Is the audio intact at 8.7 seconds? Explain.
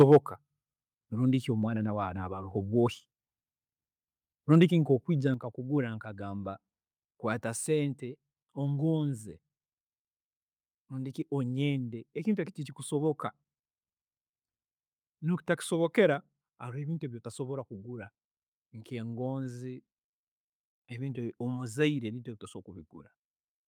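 Yes, at 8.7 seconds the speech is intact, with no dropout, click, distortion or other fault in the sound at that moment.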